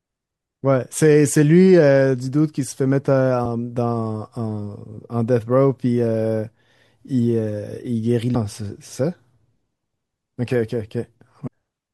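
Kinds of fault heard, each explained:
Compressed frames skipped: the speech jumps forward at 3.45, 8.34 and 11.46 s, losing roughly 300 ms, 200 ms and 400 ms, which fits whole runs of about ten, ten and twenty frames of 24 ms each, missing or rejected by the decoder. On a waveform the envelope shifts abruptly with no gap; a spectrogram shows a brief vertical seam where harmonic tracks break and resume elsewhere.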